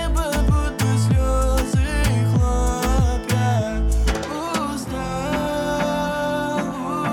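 No technical faults can be heard anywhere in the audio: the signal stays continuous and stable throughout, with no interruptions or disturbances.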